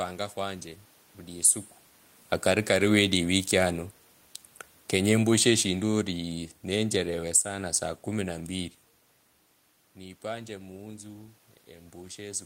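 From 4.79 to 6.13 s and again from 6.66 to 7.51 s, automatic gain falling pulls the level down by about 4 dB each time. The room noise sinks along with the speech, which separates it from a talker simply moving away.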